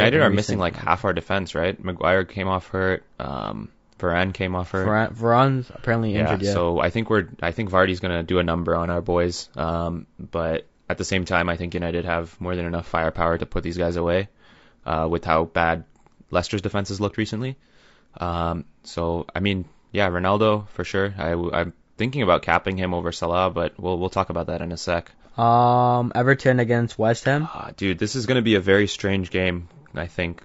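Throughout, the speech sounds rough and grainy, with noise between the harmonics and a dull, synthetic top band. This is likely low-delay AAC compression (AAC-ELD) at a rate fitting about 32 kbps; its short frames blur pitch detail. A spectrogram shows smeared harmonic stripes, filled-in gaps and a patchy upper band.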